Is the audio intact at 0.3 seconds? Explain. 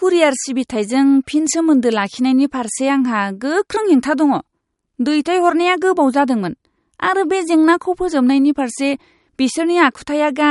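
No. At 0.3 s, as throughout the speech, there is likely MP3 compression. Nothing remains above 11.2 kHz, and the bit-starved encoder switches weak frequency lines on and off, so the sound turns watery and swirly, which a plain low-pass filter would not do.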